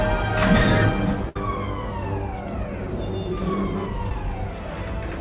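At 1.29 s there's a burst of packet loss running to about 1.36 s. A short run of packets didn't arrive in time, so the receiver kept the last bit of sound going for roughly 62 ms and faded it down as it went. You hear that as a brief held buzz or hiss that sags away. When the real audio picks up again, about 60 ms of it has been skipped, so things jump forward slightly.

Then from 4.09 to 4.11 s there's a short concealed packet loss, a much smaller hole. Around 10 ms never made it to the decoder, and the receiver patched it with roughly 11 ms of continued sound before blending back into the real signal. It's over fast and comes across as a tiny smear or wobble rather than a gap. The whole call is band-limited with nothing above 4 kHz, consistent with a 64 kbps G.711 mu-law path.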